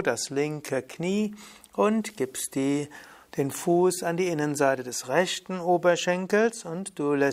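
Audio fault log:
No faults are found anywhere in this clip. There is nothing to list.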